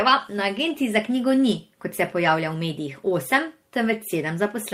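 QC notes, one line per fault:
0.57 s and 2.25 s: lost packet rebuilt from error correction. At each point a single packet went missing, and the decoder filled its 20 ms from the low-bitrate backup copy carried in the following packet, so nothing drops out. The rebuilt slice, just before "za knjigo ni kot" and again just after "knjigo ni kot se", comes through briefly rougher and grainier, a short patch of coarser texture rather than a gap.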